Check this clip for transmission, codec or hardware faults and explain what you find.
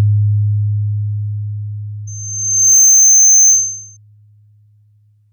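One fault is present, a loudspeaker feedback squeal from 2.07 to 3.97 s. A 6.3 kHz tone, fed back from speaker to microphone, swells in under a second to about 10 dB above the sound. It shows as a bright horizontal spectrogram line and a ballooning waveform envelope.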